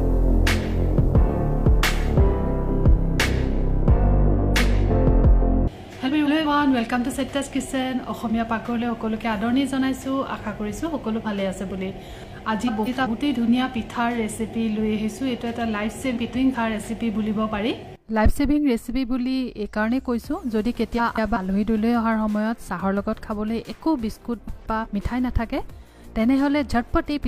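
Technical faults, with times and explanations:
6.07–6.47, 12.67–13.07, 16.15–16.55, 20.98–21.37 and 24.47–24.86 s: frames out of order. In each stretch two neighbouring blocks of about 186 ms play swapped, which fits runs of four frames. Each sounds like a brief garbled flutter. No time is lost.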